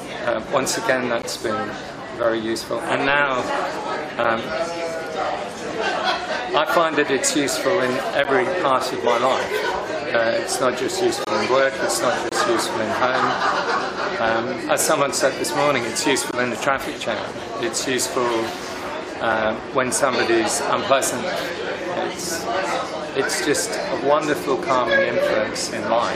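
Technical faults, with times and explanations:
1.22, 2.23, 4.24, 8.24, 11.25–11.27, 12.29–12.32, 16.31 and 19.32 s: gap between stream segments. Hard-edged silences of about 3 to 25 ms fall at 1-second segment joins, where timestamps leave holes; sound resumes intact, unlike dropouts.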